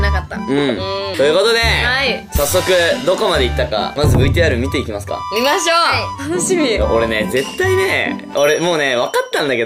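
At 4.51 s a block of digital silence, about 0.67 ms long (fitting a 32-sample block), drops the sound to zero without fading, giving a single tick rather than an audible gap.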